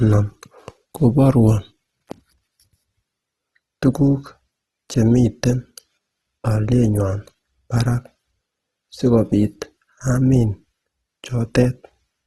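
From start to end, the speech carries plainly audible codec damage, likely from Opus compression in its music mode. The encoder keeps each band's energy but fills starved bands with folded or noisy content. So the audio turns rough and grainy rather than swirly. Nothing sounds above 12.4 kHz, a super-wideband limit. The graininess points to a low bitrate, around 16 kbps.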